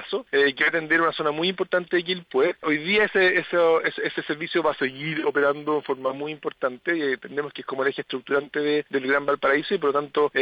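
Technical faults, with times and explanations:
4.80 to 6.09 s, drift correction step: the audio suddenly slows by about 5.3% and the pitch drops around 95 cents, nearly a semitone, then snaps back. That's likely clock-matching software slowing the playback rate in one jump to refill its buffer.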